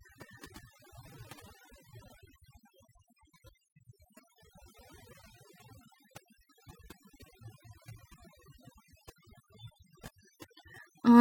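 Throughout the speech, overdone noise removal is audible: the noise reduction was set too strong, pulling frequency bands near the noise estimate far down or off. The background drops and breaks up into twinkling specks, and quieter voice detail vanishes.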